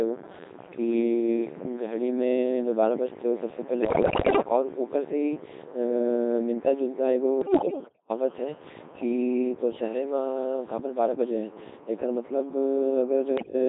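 Speech heard entirely through a Codec 2 vocoder. The voice is rebuilt from sine waves, so it sounds robotic and buzzy throughout. The heavy damage fits roughly 2.4 kbit/s operation. Unlike an ordinary low-bitrate codec's swirly smearing, this resynthesis discards the real waveform altogether. Bit errors on digital voice radio strike at 3.82–4.42 s, 7.42–8.10 s and 13.38–13.54 s, with a high share of bits flipped. There the pitch, level and tone lurch into bleeps and warbling gibberish, rather than the silent gaps packet loss would leave.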